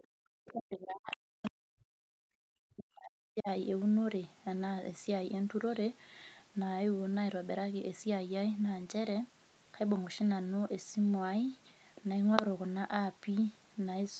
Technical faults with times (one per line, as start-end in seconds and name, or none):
0.00-0.04 other side's voice leaking through
0.04-0.24 background gated by the echo canceller
0.45-0.53 other side's voice leaking through
0.52-3.48 speech suppressed in double talk
1.11-1.16 other side's voice leaking through
1.43-1.50 other side's voice leaking through